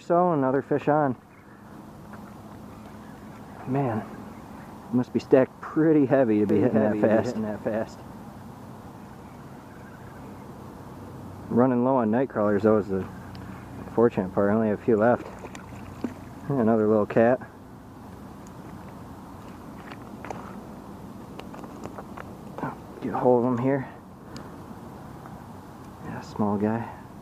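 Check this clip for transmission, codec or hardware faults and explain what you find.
There's one fault: a doubled audio track from 6.49 s to 8.91 s. For that stretch, a second copy of the sound trails the original by roughly 0.7 s, around 5 dB quieter. It's full-band and dry, with no decay or room colour, and it cuts in and out abruptly, so it reads as a hard echo rather than reverb. The likely cause is the same signal being picked up a second time through a slower path, or an edit leaving two copies out of step.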